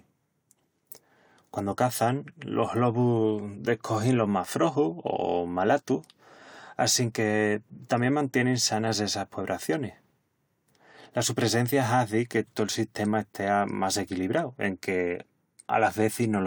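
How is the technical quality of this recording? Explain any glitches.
Listening through the recording, nothing stood out as a technical problem or glitch.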